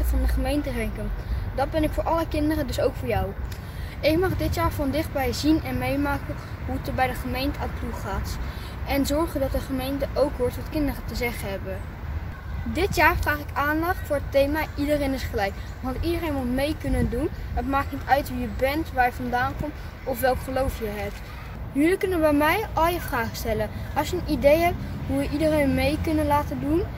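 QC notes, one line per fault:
No faults to log for this clip.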